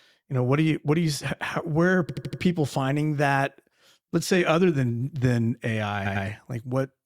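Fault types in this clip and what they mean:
Repeated frames: a stretch of encoded speech is replayed back to back, heard as a stutter at 2.09–2.41 s (an 80 ms block four extra times) and 6.05–6.25 s (a 100 ms block twice more). Waveform and spectrogram show identical slices copied side by side.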